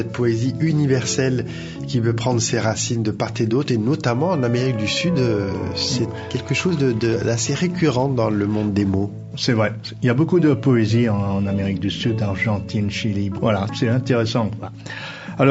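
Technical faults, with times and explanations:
No technical faults found.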